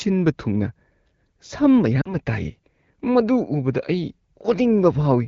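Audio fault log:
2.01–2.15 s, lost AMR speech frames: a 40 ms gap that fits two dropped frames. The decoder replays its last settings at falling gain, so the speech briefly smears and dips.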